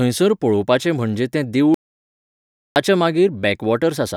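At 1.74 s, right after "पळोवपाचें म्हणजे तें", the speech cuts off mid-flow into an audio dropout to silence lasting until 2.76 s, roughly 1.02 s in all. The gap is silent, with no room tone or noise floor underneath, and the speech resumes abruptly at the far edge. This points to the input signal being lost while recording continued, likely a momentary disconnection or mute, so whatever was spoken in that second is gone.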